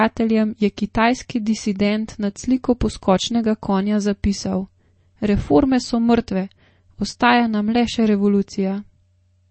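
Throughout the speech, the sound has a watery, swirling quality, with metallic chirps on s sounds and softened consonant onsets, and nothing is heard above about 8.3 kHz, which gives it a dull, boxed-in top. This is likely MP3 compression at a low bitrate, around 32 kbps: short of bits, the encoder cut the treble at a fixed point and let weak frequency lines flicker on and off between frames.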